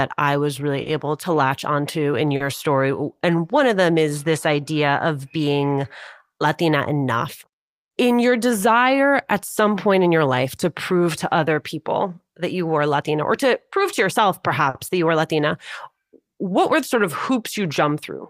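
Throughout the speech, clock drift between sender and receiver is present: the sender's clock runs roughly 4% slow, so the receiver's jitter buffer keeps draining. Unlike a single network glitch, this mismatch never resolves, and its effects recur across the whole clip.

Right after "I was", from 0.72 s to 17.94 s, repeated timing corrections stretch the audio to about 97% speed, adding roughly half a second in small, unevenly spaced repeats. They all push the same way, so the tempo feels faintly dragging and unsteady rather than clicking or skipping.

Also just after "I was", at 0.82 to 0.88 s, then at 2.36 to 2.42 s and 14.70 to 14.77 s, come short stalls from a late packet. The buffer ran empty and the last sound was held for 40, 40 and 50 ms respectively before resuming at the same point. Nothing is lost, which separates these from dropouts: a sound simply lingers with a slight buzz or dip.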